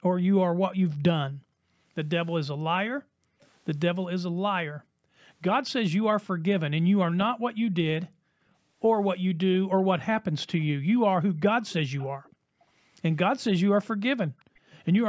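From 1.72 to 5.19 s the background gated by the echo canceller kicks in. The room tone keeps ducking out, about 40 dB at its deepest and roughly a second and a half in total across that span. The canceller is clamping the mic hard while the loudspeaker plays, then letting go.

Inside that stretch, at 3.41 s, there's a tiny, very faint delayed scrap of sound trailing by about 391 ms. That's likely an echo leak, where the side playing the call on a loudspeaker didn't fully cancel what its mic picked up and sent a bit of it back.

Another brief gating dip hits from 6.32 to 6.43 s, about a tenth of a second. Then 9.65 to 12.68 s gets the longer treatment again, with around a second and a half of background knocked down by up to about 40 dB.

The same very faint delayed copy blips at 10.59 s. From 11.64 to 12.31 s it's a more noticeable stretch, only about 25 dB under the speech. A last one from 14.26 to 14.8 s sits about 30 dB down, again 391 ms behind.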